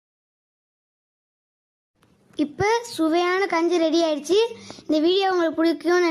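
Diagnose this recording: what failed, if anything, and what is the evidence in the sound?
At the playback stage, a gap between stream segments appears: mismatched segment timestamps leave a hole the player fills with silence, a hard-edged 6 ms dropout at 2.00 s.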